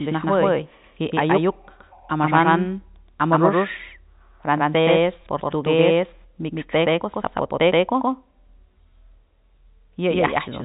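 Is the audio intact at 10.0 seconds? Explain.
No. At 10.0 seconds the audio carries a doubled audio track, present through the whole clip. A second full-band copy trails the original by about 150 ms at roughly the same level, likely from a second capture through a slower path or an edit holding two copies out of step. It sounds like a hard, slapback echo with no room decay. On a spectrogram each onset appears twice, about 150 ms apart, both cut off at 4 kHz by the telephone coding. The waveform shows paired, equally tall bursts.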